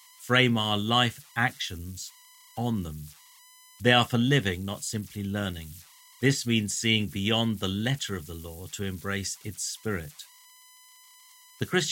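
Converter idle tones run through the whole of this speech clip: a whistle near 1 kHz sits in the pauses, and a grainy texture rides under the quieter passages, at about 25 dB below the speech. A delta-sigma converter working without dither settles into repeating bit patterns whenever its input is small, and those patterns produce steady tones. Their pitch follows the input's offset, which here lands them around 1 kHz.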